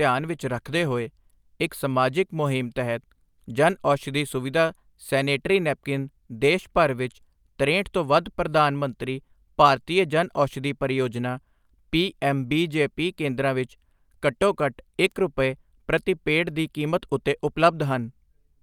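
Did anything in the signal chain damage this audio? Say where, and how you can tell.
Yes: a bit error spike, a single flipped bit in storage or on a digital link, throws one sample off by a power of two, heard as a sharp broadband tick at 15.12 s.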